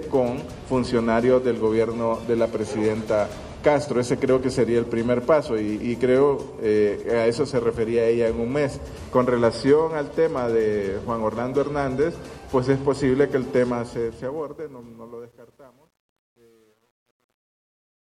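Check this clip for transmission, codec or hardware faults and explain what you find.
One fault is audible: truncation distortion on a fade. The fade-out begins around 13.6 s and runs to the end of the clip at 18.0 s. From 13.57 s the fading signal is grainy. It is worst from 14.84 s to the end at 18.02 s. The fade is being computed with too few bits and no dither. As the level drops, the waveform falls onto a handful of coarse steps. The resolution fits about 10 bits. The tail turns gritty.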